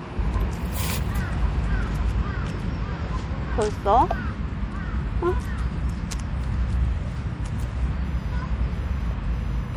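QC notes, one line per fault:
Throughout: MP3 compression, plainly audible watery, swirly texture with dulled treble and smeared attacks, likely from a low bitrate around 64 kbps zeroing weak frequency lines.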